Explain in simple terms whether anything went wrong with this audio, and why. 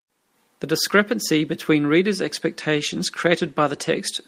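A call bitrate drop hits from 2.72 to 4.07 s, right after "discrepancy between reader’s": the connection squeezed the speech into fewer bits, so it sounds rougher and duller.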